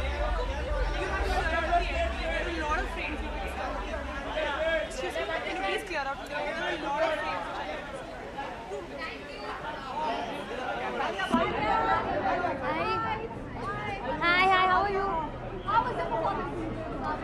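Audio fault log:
11.34–17.23 s de-emphasis applied wrongly: the sound turns dull and muffled through to the end, the highs rolling off smoothly to about 11 dB down at 10 kHz relative to 1 kHz. A treble cut meant to undo pre-emphasis landed on audio lacking it, or was applied twice.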